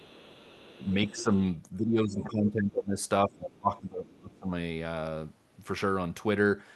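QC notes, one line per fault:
0.00–0.85 s and 1.08–1.23 s, other side's voice leaking through: a faint second voice sits under the talker, about 25 dB below at the start and about 20 dB below in the brief later burst. This is likely residual loudspeaker echo the canceller missed. On a spectrogram it shows as weak, separate harmonic traces.
1.04–1.32 s, 1.77–2.98 s and 3.26–4.52 s, speech suppressed in double talk: the talker's level sinks by about 10, 20 and 25 dB respectively, over roughly 0.3 s, then about a second each time. This is likely the echo canceller attenuating both talkers during overlap. The waveform envelope visibly caves in, and spectrogram energy thins.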